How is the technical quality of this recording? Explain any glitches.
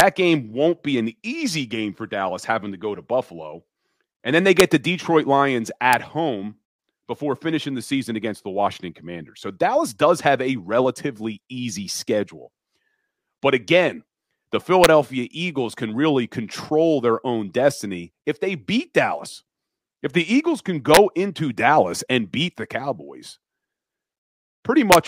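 The recording has integer overflow cracks on loud speech peaks, at 0.00, 4.60, 5.93, 14.84, 20.94 to 20.97 and 24.92 to 24.95 s. Peaks pushed up to about 4 dB past the limit wrap to the opposite sign instead of clipping. Each one is a sharp, violent crack.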